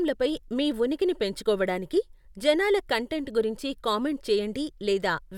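No technical faults occur anywhere in the speech, so there is nothing to describe in time order.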